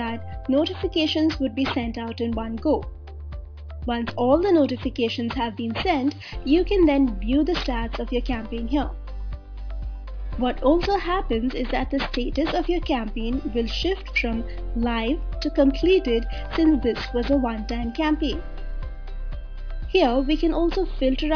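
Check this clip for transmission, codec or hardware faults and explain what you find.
One fault runs through the whole clip: aliasing. Throughout, the sound was resampled down without an anti-alias filter, which fits a drop to about 11 kHz. Everything above 5.5 kHz folds back below it, about 20 dB under the signal, giving a gritty, metallic edge. A spectrogram shows energy packed hard against 5.5 kHz, with mirrored, unrelated streaks.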